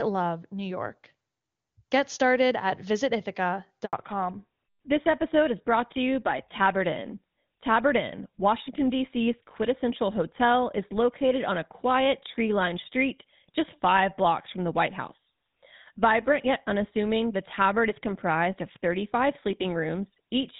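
Right at 3.85 s the audio just drops out, a handover gap of about 80 ms that runs to 3.93 s. That's the call being passed from one network to another: while the link switches over, no speech frames make it through, so the voice fades out over a few tens of milliseconds and sits in silence until the new connection picks up. Whatever was said in that window is gone.

From 3.93 s to the end you get the fallback to narrowband. Before the gap the sound is clean HD Voice, with the airy top end you'd expect from a high AMR-WB rate and no codec roughness to speak of. Afterwards everything above 4 kHz is simply missing, so the voice turns duller, boxier and a bit grainier. The new leg has landed on an older narrowband codec, which fits GSM full rate at 13 kbit/s.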